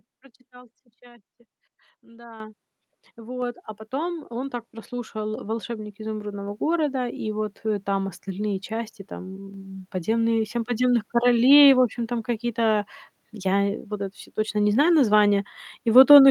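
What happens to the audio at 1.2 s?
Nothing goes wrong at 1.2 s; the audio plays through that moment intact, with no dropout, click, distortion or other fault.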